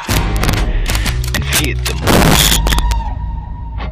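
Integer overflow runs throughout the clip: the signal is driven about 2 dB past the integer ceiling, and instead of being limited, each overshooting peak wraps around to the opposite extreme. Only a small fraction of samples, around 3 percent, cross the limit, but each peak over it produces a harsh, violent crack far sharper than ordinary clipping.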